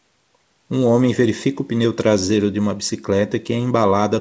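No technical faults are audible.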